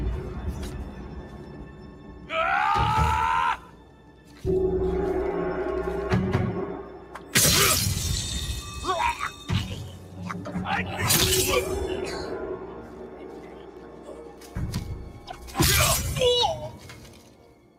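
A noise suppressor built for speech has been left running on this sound from start to finish, so it's a clear case of a noise suppressor applied to music or sounds. It keeps mistaking steady, sustained material for background noise and pulling it down, while sharp onsets slip through mostly intact. The result is a level that breathes and pumps, swinging by something like 10 dB as the processor changes its mind about what counts as noise.

The sound cut by the noise suppressor shows up as distinct dips, mostly about 7 dB deep. These fall at 0.84 to 2.3 s, 3.58 to 4.44 s, 6.83 to 7.34 s, 9.88 to 10.51 s, 12.6 to 14.56 s, 15.13 to 15.42 s (a touch shallower, about 6 dB), and finally 16.74 s through to the end. The longest is the one around 12.6 s, at roughly two seconds. In each case held or decaying parts sink and tails get clipped short, so the sound thins out rather than ringing naturally.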